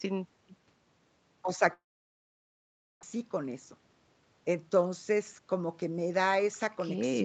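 From 1.73 s to 3.05 s, a long network dropout, likely a stall in arriving packets, cuts the speech. The receiver briefly stretches the last sound into a fading buzz, then about 1.2 s of near-silence follows, and the speech resumes with over a second of it gone.

From 3.13 s to 4.22 s comes a jitter buffer speed-up. The delayed packets left a backlog of around 150 ms, so the receiver trims short pitch-period slices in quick succession. The speech plays at 112 % speed at unchanged pitch and sounds noticeably hurried.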